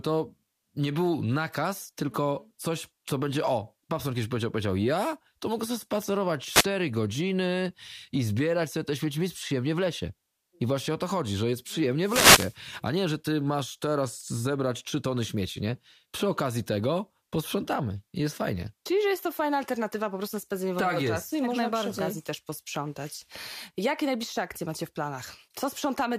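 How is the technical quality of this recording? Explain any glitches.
The recording has two wireless microphone noise hits in the speech, at 6.47 to 6.67 s and at 11.98 to 12.59 s. In each, the FM radio link faded as reflected signals cancelled, letting receiver noise surge as a brief swish of static over the voice. The first lasts about 0.2 s and the second about 0.6 s. Unlike a digital dropout, these bursts fill the gap with hiss rather than cutting to silence or stuttering.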